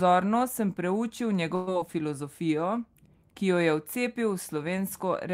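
At 1.55 s, just after "sem preučil", a burst of packet loss hits: a run of consecutive packets, about 120 ms of audio, never arrived in time to be played. The receiver covered the hole by stretching out the last sound it had, holding it for about 115 ms while letting it fade, until 1.69 s. That fragment is heard as a brief smeared hold that dies away, and the speech then resumes with a small piece skipped.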